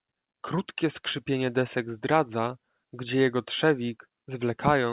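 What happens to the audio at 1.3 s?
Nothing goes wrong at 1.3 s: the speech carries on intact through the call path, with only the narrowband sound of the G.711 link, where nothing reaches above 4 kHz.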